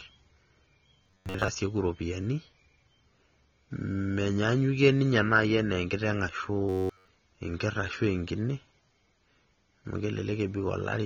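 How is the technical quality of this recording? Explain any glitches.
The technical quality is poor. Heavy lossy coding affects the whole recording, and the speech briefly turns robotic twice.

AAC compression, throughout: the speech was likely coded as AAC-LC at about 24 kbps. At that rate the encoder lowers its cut-off and starves the remaining bands. The sound is plainly dull and smeared, with a fizzy, warbling texture on sibilants.

Robotic sound from repeated short buffers, at 1.03–1.48 s and 6.69–7.08 s: audio likely arrived late, and playback filled the gaps by replaying one short buffer. Most of the first stretch and practically all of the second repeat. That imposes a rigid 93.8 Hz metallic buzz, which fits a buffer of about 10.7 ms.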